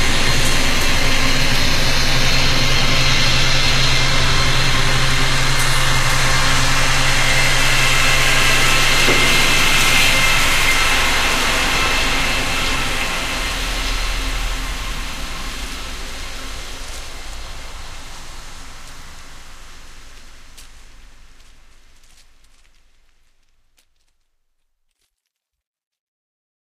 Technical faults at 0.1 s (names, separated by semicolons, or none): adaptive stream starting at a low bitrate